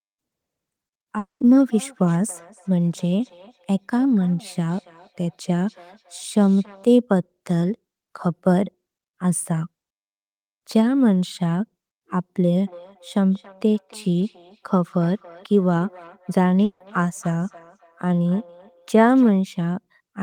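At 1.18 s the sound turns into a fading buzz, leaving about 140 ms of silence before it resumes at 1.41 s with roughly 220 ms lost. At 16.64 s a similar 160 ms fill appears, with no silence, until 16.81 s. Each is likely a long network dropout, with the receiver stretching the last sound over the gap.

From 1.67 to 6.88 s, and again from 12.63 to 19.34 s, each word returns thin and ringing about every third of a second, peaking about 26 dB and then about 24 dB below the speech. This is feedback echo between two devices: one device replays the other's microphone, and that microphone picks the sound up again.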